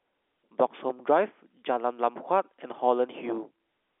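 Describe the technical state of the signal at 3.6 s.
At 3.6 s the audio is intact, with no fault present, just the narrow telephone band of G.711 coding that carries nothing above about 3.8 kHz.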